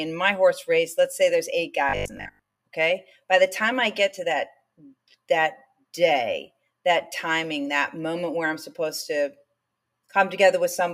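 From 1.89 to 2.59 s, robotic sound from repeated short buffers turns most of the audio into a rigid 50 Hz buzz, likely from a starved buffer looping about 20 ms, unlike steady mains hum.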